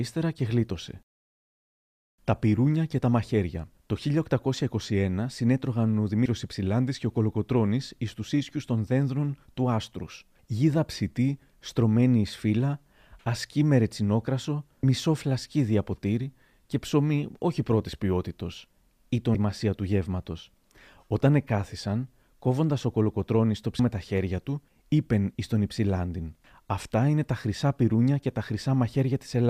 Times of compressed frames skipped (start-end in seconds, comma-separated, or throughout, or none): 6.25, 14.83, 19.34, 23.79